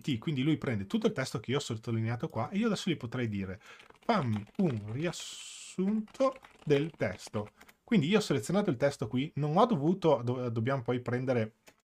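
No technical faults can be heard at any point in the audio.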